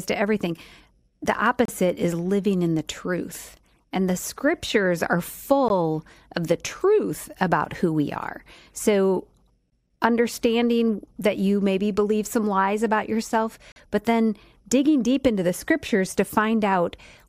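A gap between stream segments opens at 1.65–1.69 s, 5.68 s, 9.70 s and 13.72–13.76 s, every 4 s at segment boundaries. Mistimed segments leave holes of about 17 to 42 ms, filled with silence. Hard-edged dropouts appear as clean vertical blank stripes on a spectrogram and flat silent stretches in the waveform.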